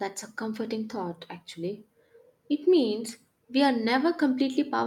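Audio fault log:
Throughout: clock drift between sender and receiver. The sending clock runs roughly 2 percent slow against the receiving clock, so audio arrives a little too slowly for playback and the jitter buffer keeps draining toward empty. To avoid gaps, the receiver has to stretch the stream by repeating small fragments. The result is a faint, persistent unevenness in timing rather than one clear fault.
0.64 to 4.78 s: repeated timing corrections. Across this span the receiver repeatedly inserts short repeated pieces to compensate for the slow sender. All of them lengthen the audio, and together they add about a tenth of a second, so the speech plays at about 98 percent of its natural rate. Because the insertions are small and irregularly spaced, they come across as slight hiccups and a faintly dragging, uneven tempo rather than distinct glitches.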